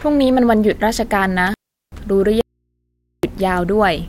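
From 1.47 to 2.00 s there is an intermittent contact. A loose plug or cable connection breaks for about 381 ms, and the speech cuts out with crackle at both edges while faint hiss fills the open line before contact is restored.

From 2.41 to 3.23 s the speech drops out for about 824 ms, an audio dropout to a faint residue. The gap holds only mains hum, far below the signal, around 55 dB down. The likely cause is a lost source feeding a path that stayed live.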